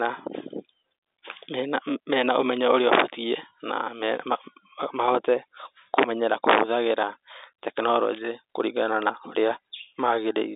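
No technical faults can be heard in the speech. The G.711 telephone coding gives it the narrow line band of roughly 300 Hz to 3.7 kHz with nothing above 3.8 kHz, and any coding damage is faint at most.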